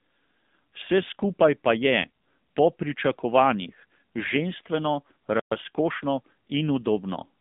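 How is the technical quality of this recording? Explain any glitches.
The recording is technically poor: a narrowband mobile codec degrades it from start to finish, and there is a brief dropout followed by hurried audio near the end.

AMR narrowband mobile codec: Throughout the clip, the speech sits in a narrow band from about 150 Hz to 3.6 kHz, with no low body and nothing in the upper range. AMR-NB samples at 8 kHz and rebuilds the voice from a vocal-tract model excited by a few pulses per 5 ms subframe. The codec damage is plainly audible as a buzzy, synthetic edge, which fits a low mode of around 7.4 kbps.

Playback stall: At 5.40 s, just after "po pričakovanjih ženstveno", the audio stops dead for 120 ms before resuming at 5.52 s. The sound cuts off mid-flow rather than fading out, so the gap registers as a hole in the speech. The likely cause is the player running short of buffered data, or its output thread being blocked, and producing silence until it recovered.

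Time-compressed catch-up: From 5.52 s to 6.32 s, right after the gap, the speech runs at about 1.15 times normal speed with unchanged pitch. The player is clearing the backlog the stall left behind by removing short slices of audio and cross-fading across the joins. This makes the phrase sound rushed.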